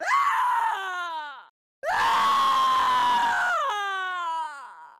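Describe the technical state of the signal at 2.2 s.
At 2.2 s the sound carries a fast, regular ticking, close to a soft rattle at roughly twenty clicks per second, running from 0.12 s to 4.98 s. These are clock slip clicks, likely from two unsynchronised clocks differing by around 400 ppm, forcing a one-sample drop or repeat each time.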